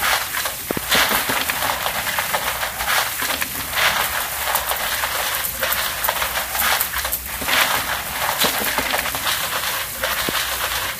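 At 0.71 to 0.79 s, two loud pops, about 20 dB above the sound, then one at 10.29 to 10.31 s, about 15 dB up, likely from a voltage pulse such as a plug or switch. They appear as tall waveform spikes and full-band vertical spectrogram streaks.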